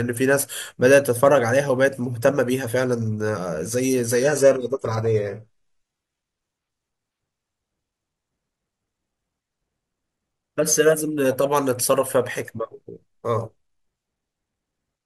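From 4.22 to 6.22 s the treble abruptly thins, with nothing above 11.8 kHz and no gap: an adaptive stream at a lower bitrate.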